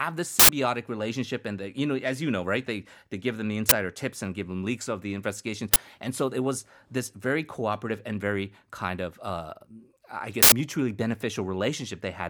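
Speech broken by four short, loud bursts of harsh digital noise: about 93 ms at 0.39 to 0.49 s and 10.43 to 10.52 s, and about 23 ms at 3.69 s (between "they give them the" and "tips and give them") and 5.74 s (after "leaks of the investigations"). Each is an uninitialised buffer: a block was played before audio was written to it, so leftover memory came out as samples. The lengths fit 4096- and 1024-sample buffers.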